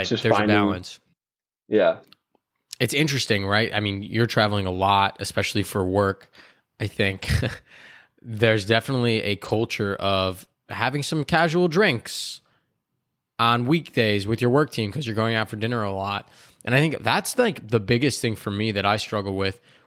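At 4.73 to 4.80 s, 7.10 to 7.25 s, 9.44 to 9.67 s and 10.41 to 10.43 s the audio turns briefly grainy and hissy without ever dropping out. That is a lost packet rebuilt from error correction. Each missing stretch was replayed from a coarse low-bitrate copy carried in the following packet, about 40, 80, 120 and 20 ms long respectively. The longer rebuilds cover several separate lost packets. The audio stays continuous but sounds rougher, which tells it apart from concealment.

Right after, at 10.44 to 10.49 s, comes a short concealed packet loss. About 20 ms arrived too late, and the decoder filled the hole by extending the preceding sound before fading back into the real signal. It comes across as a short smear or wobble, because the filler is guessed from the sound before it instead of decoded from a rough copy.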